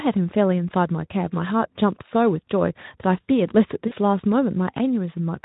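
At 3.87 s, VoIP packet loss concealed by the speech codec briefly replaces the audio, about 40 ms of it, which fits two lost 20 ms frames. The decoder repeats its last pitch and filter state, producing a short buzzy or noisy, fading smear. On a spectrogram, flat streaks dim until about 3.93 s. Light Speex coloring is audible around it.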